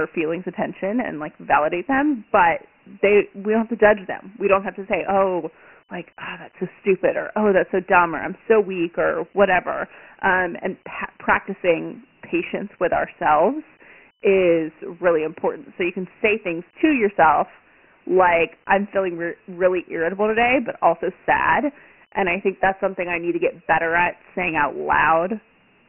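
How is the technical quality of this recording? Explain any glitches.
Poor, with one fault running through the whole speech clip. Dialogic VOX ADPCM: a gritty hiss trails the voice throughout, and nothing sounds above 2.9 kHz. Coarse 4-bit step coding at a rate fitting 24 kbps and 6,000 samples a second causes it.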